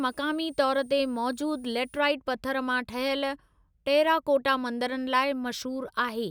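From 0 to 2.0 s, just before "पथरु मां", there's a switching supply whistle, a faint high tone drifting between 8.7 and 9.7 kHz, roughly 30 dB below the speech.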